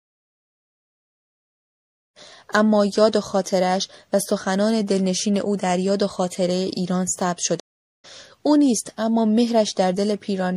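Running through the whole clip, likely MP3 compression at a tight bit budget, fitting a 64 kbps stream, lets weak frequency lines flicker between frames, so the speech sounds watery and swirly, with metallic chirps on s sounds and smeared consonant attacks. The clean fade-in near 2.0 to 2.19 s comes through smoothly. From 7.60 to 8.05 s a stream reconnect occurs: the connection drops, the player falls silent for 436 ms, then a fresh decoder picks up mid-stream, so the speech jumps ahead by about half a second.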